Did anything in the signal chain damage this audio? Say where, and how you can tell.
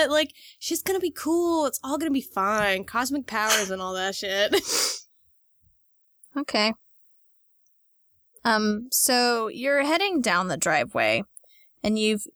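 No, nothing along the chain seems to have hurt this speech recording; there's no point where the signal gets mangled, dropped or bent out of shape.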